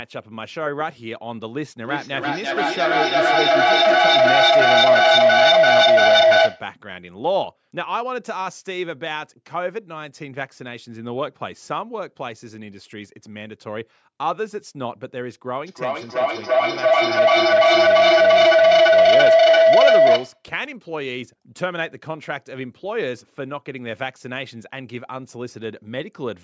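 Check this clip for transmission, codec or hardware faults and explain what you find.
There is a feedback howl, twice: from 1.84 to 6.76 s and from 15.66 to 20.47 s. An acoustic loop between two call devices gains level each pass, narrowing to a tone around 700 Hz that pulses roughly every 300 ms and peaks about 13 dB above the speech.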